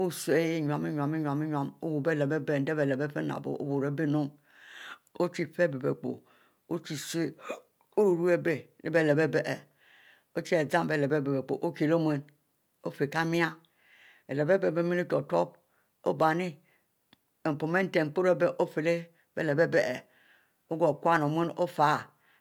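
No technical faults can be heard anywhere in this speech recording, so there are none to describe in time order.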